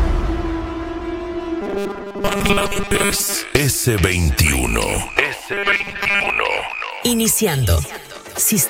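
From 1.62 to 3.35 s and 5.53 to 6.30 s, robotic sound from repeated short buffers: a rigid 200 Hz buzz, likely from a 5 ms segment looping while most of the real audio is skipped.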